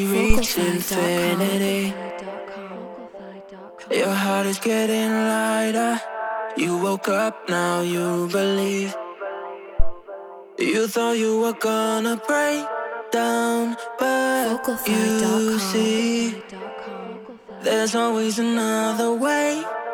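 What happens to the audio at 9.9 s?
A phantom power thump runs from 9.80 to 9.95 s. A supply was switched on or off on a live input, and the voltage step passed through the coupling capacitors. It sounds as a deep thump peaking near about -4 dBFS, decaying within roughly 34 ms.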